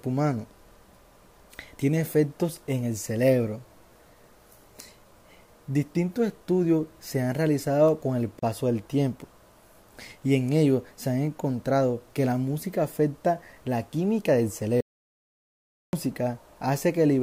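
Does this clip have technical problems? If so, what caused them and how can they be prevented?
Yes. A gap at a join of encoded pieces opens from 8.39 to 8.43 s. For about 33 ms the sound drops out, then resumes where it left off. Separately encoded pieces were joined with their encoder delay and end padding left in. Trim that delay and padding, or encode the whole piece in one pass.

An audio dropout to silence runs from 14.81 to 15.93 s. The sound cuts to total silence, with no room tone, for about 1.13 s. The likely cause is a lost input, such as a disconnected device or a stray mute, while silence kept being written. Secure connections and monitor input levels during recording.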